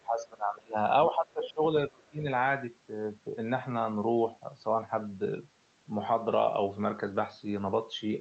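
The speech sinks and breaks up from 0.00 to 0.76 s, again from 1.08 to 1.63 s, and from 1.87 to 2.26 s, dropping by about 25, 15 and 25 dB. This is speech suppressed in double talk, likely an echo canceller turning the talker down while the far side spoke.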